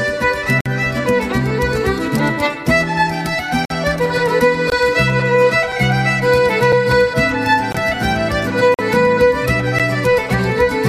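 Gaps between stream segments cut hard-edged silent holes into the sound at 0.61, 3.65, 4.70, 5.72, 6.72, 7.72, 8.74 and 9.79 s, lasting from 4 to 51 ms. The roughly one-second spacing matches 1.0 s segments whose timestamps leave small gaps.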